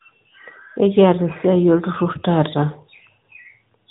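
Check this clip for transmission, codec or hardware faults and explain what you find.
One fault runs through the whole clip: AMR narrowband mobile codec coding. Nothing passes above 3.8 kHz, so the speech sounds boxed and telephone-like, and its vocal-tract model rebuilds each 5 ms from a few pulses, leaving a plainly audible buzzy, synthetic edge that points to a mode around 10 kbps.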